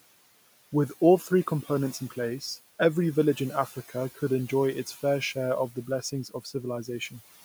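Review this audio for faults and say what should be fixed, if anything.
Noise suppressor artifacts run through the whole clip: the suppressor pulls steady background down by about 17 dB frame by frame, so the leftover noise pumps between phrases and rises under the speech. Speech cut by the noise suppressor happens at 3.67–3.95 s and 6.25–6.55 s, where the suppressor mistook soft speech for noise and dropped it by up to about 11 dB and about 13 dB, leaving brief stretches of roughly 150 ms and 100 ms sounding swallowed. The room noise sits about 18 dB below the speech and belongs to the recording. To prevent both, use a gentler suppression depth and a slower, speech-aware gain so quiet consonants and trailing syllables are not treated as background.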